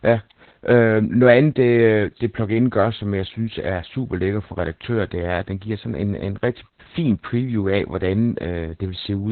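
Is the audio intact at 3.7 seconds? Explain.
No, the audio is not intact at 3.7 seconds, because Opus voice compression degrades the whole clip. The encoder runs in its SILK speech mode with the band cut to narrowband, about 4 kHz, and the heavy quantising of the excitation fits a very low bitrate around 8 kbps. At 3.7 seconds the speech therefore sounds muffled and thin, with a hoarse, slightly robotic edge.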